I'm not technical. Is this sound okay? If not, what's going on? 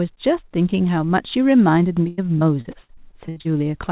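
No. From 2.08 to 3.47 s there is repeated packet loss (robotic sound). Eleven brief dropouts, each filled by repeating the last sound, leave the speech choppy.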